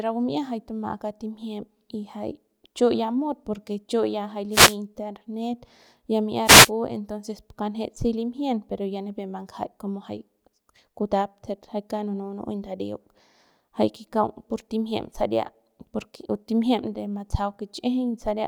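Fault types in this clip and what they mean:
Wireless microphone noise hit: the FM radio link from the microphone fades briefly as reflected signals cancel at the receiver, so receiver noise rises and breaks through as a short swish of static over the speech. It happens twice, from 4.51 to 4.76 s after "porque chu ya jay" and from 6.44 to 6.71 s before "entonces pu kanjet si". Each burst lasts roughly a quarter of a second.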